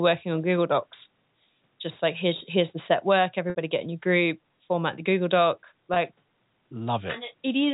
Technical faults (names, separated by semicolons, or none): packet loss with pitch repetition